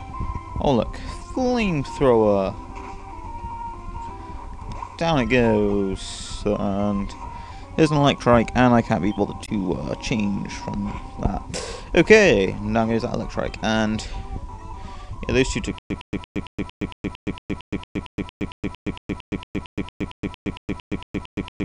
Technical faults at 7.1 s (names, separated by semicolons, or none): none